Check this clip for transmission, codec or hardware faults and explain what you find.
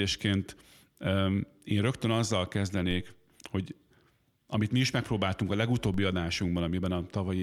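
Two DC steps are present in this speech clip. At 2.91 s, just after "én rögtön azzal", and again at 5.94 s, after "mi is megpróbáltunk a", the waveform's zero line jumps abruptly by about -32 dBFS. Each offset then drains away slowly, as a high-pass near 2 Hz would produce, typical of a converter recalibration or a biased input switching in. Each shift is heard as a brief low thump while the speech continues unaffected.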